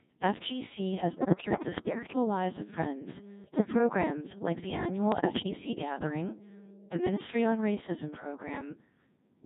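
Robotic and buzzy from start to finish, the speech sounds assembled from steady tones rather than recorded. That is the Codec 2 vocoder at work: it transmits only pitch, voicing, level and a coarse spectral envelope, then the decoder rebuilds the voice from sine waves, discarding the original waveform. The heavy damage points to its 1.6 kbit/s mode.

From 1.13 to 2.16 s the voice breaks into warbling bleeps and robotic gibberish, lurching in pitch, loudness and tone colour. The same happens briefly from 3.44 to 3.78 s, and again, a little less violently, from 5.12 to 5.81 s. These are bit errors on digital voice radio. Because each bit in such a low-rate stream sets the pitch, level, voicing or spectrum of a whole frame, corrupted bits (around one in ten in the first two bursts, about half that in the third) make the decoder synthesise nonsense.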